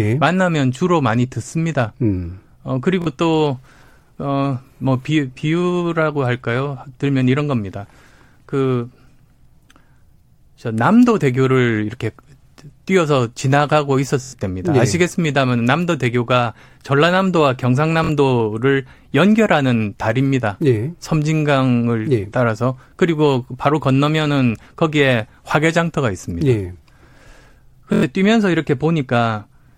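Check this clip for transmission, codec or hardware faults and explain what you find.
The speech has four repeated-buffer stutters, at 3.02 to 3.07 s, 14.23 to 14.33 s, 18.04 to 18.09 s and 27.93 to 28.03 s. Each time, fresh audio missed its deadline, so the device replayed its last block of about 23 ms, which fits a 1024-sample buffer. The first and third events repeat twice and the others four times, each with hard joins. The result is a brief stutter, and roughly a twentieth or a tenth of a second of speech goes missing.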